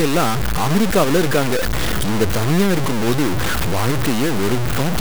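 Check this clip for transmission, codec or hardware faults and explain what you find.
One fault runs through the whole clip: low bit depth without dither. The speech sounds like it has a 3-bit word length, likely truncated with no dither, so the error follows the waveform. The grainy distortion is nearly as loud as the speech, and quiet passages sputter or drop out.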